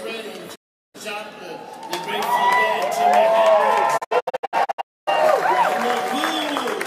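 Two digital broadcast dropouts interrupt the audio. At 0.54 s it fades out within 20 ms and stays silent until 0.96 s. From 3.96 to 5.09 s the sound breaks into several short holes, the longest 256 ms, totalling about 672 ms of silence. The receiver muted each time checksums failed or sync was lost, which fits runs of roughly a dozen and twenty lost frames, and resumed only on valid data. The content during these gaps is gone.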